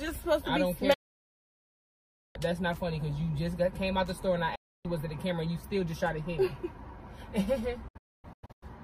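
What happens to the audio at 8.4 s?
A digital broadcast dropout runs from 7.88 to 8.63 s: the receiver mutes on failed frames, cutting several quick silent holes, the longest 256 ms.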